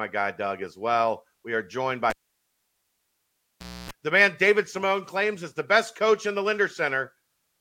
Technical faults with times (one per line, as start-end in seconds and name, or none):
2.10-3.91 cable pulled and plugged in